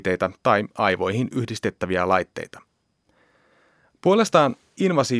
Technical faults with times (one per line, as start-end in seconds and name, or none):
none